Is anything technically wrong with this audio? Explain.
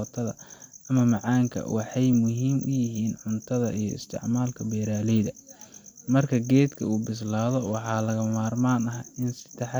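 No, nothing technically wrong stood out on listening to this speech recording.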